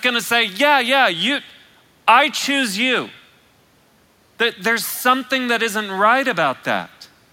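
No technical faults are audible anywhere in the speech recording.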